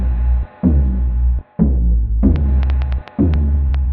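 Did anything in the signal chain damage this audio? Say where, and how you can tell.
Yes. Something in the analogue wiring or interface, likely interference from nearby equipment, starts injecting pulses at 2.36 s. A train of clicks follows to the end, about 5.1 per second with uneven spacing, around ten similar ticks, peaking about 5 dB above the sound.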